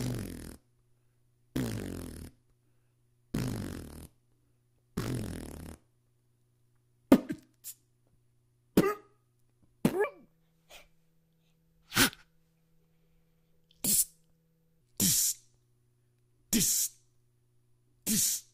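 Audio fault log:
10.04 to 14.81 s, section at the wrong speed: This stretch runs 1.35 times too fast. Pitch and tempo rise together, so everything sounds higher and more hurried, raised by roughly five semitones. Both change in step at 10.04 s and drop back at 14.81 s. This is likely a playback or editing stage running that section against the wrong clock rate.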